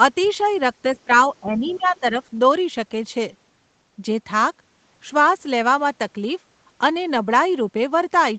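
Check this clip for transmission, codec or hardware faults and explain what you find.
Two echo-canceller faults show up in this speech, both early, clustered between 1.05 and 2.14 s.

Speech suppressed in double talk, at 1.05 s and again from 1.34 to 2.14 s. The talker's level sinks in two places: a brief dip of about 15 dB lasting roughly 40 ms, then a longer stretch of about 10 dB, patchy across roughly half a second. The likely cause is double talk. With both sides speaking at once, the echo canceller couldn't tell the local talker from loudspeaker echo and attenuated everything together.

Other side's voice leaking through, from 1.49 to 1.78 s. A faint second voice, about 20 dB below the talker, rides underneath during the same suppressed stretch. It most likely comes from the far end's audio, played on the local loudspeaker, re-entering the microphone and surviving the echo canceller's subtraction. 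It is confined like the rest of the clip to a band topping out at 8 kHz, consistent with an Opus wideband call.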